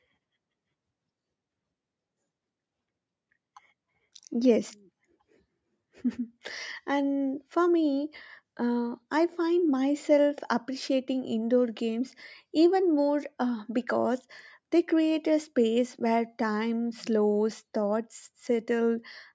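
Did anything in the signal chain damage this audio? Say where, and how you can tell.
No, the speech shows no damage from the signal chain: it has the shape of a normal call microphone path, with the lowest bass trimmed by the usual high-pass filter and no content above 8 kHz.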